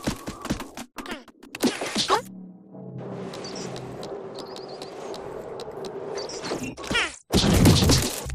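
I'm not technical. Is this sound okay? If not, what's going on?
No. From start to finish, the audio is read two samples at a time (double speed). The player treats each pair of samples as a single step, as if the file held two channels or wider samples than it really does. Everything therefore plays twice as fast and a full octave, 12 semitones, higher than it should.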